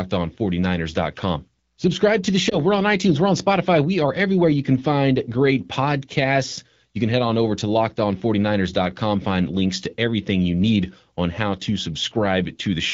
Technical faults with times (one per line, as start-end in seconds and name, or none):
2.49-2.55 lost AMR speech frames